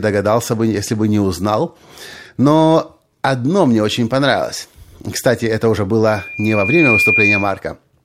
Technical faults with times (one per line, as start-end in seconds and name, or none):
6.07-7.60 loudspeaker feedback squeal